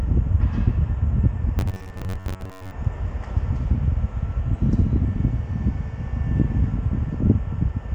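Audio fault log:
1.59–2.72 s, robotic sound from repeated short buffers: the sound becomes a rigid, metallic buzz locked near 94 Hz. This likely comes from playback running short of new audio and looping a stretch of about 10.7 ms, which stands in for roughly half the real signal.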